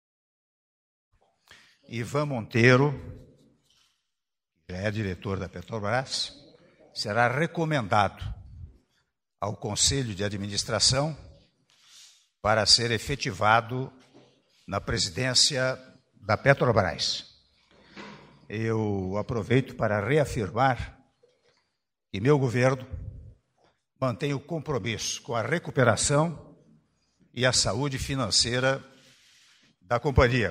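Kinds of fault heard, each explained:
No faults heard; the only level change is an edited fade-in, which ramps up without a click and finishes by about 1.15 s.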